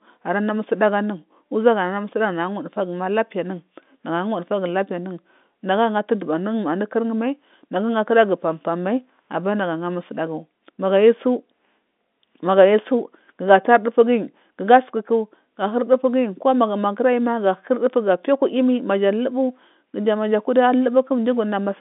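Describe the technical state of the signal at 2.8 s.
At 2.8 s the audio is intact, with the speech carried cleanly through what sounds like ordinary G.711 telephone coding, band-limited to roughly 200 Hz to 3.6 kHz.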